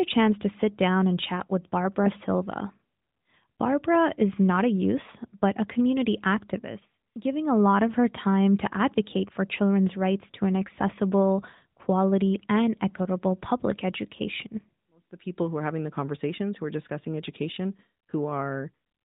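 No technical faults are audible.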